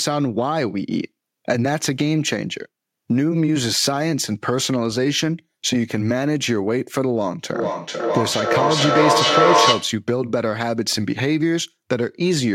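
Feedback echo between two devices, 7.54 to 10.03 s: a second device loops the speech back roughly every 0.4 s, ringing, up to about 5 dB louder, showing as evenly spaced spectrogram copies.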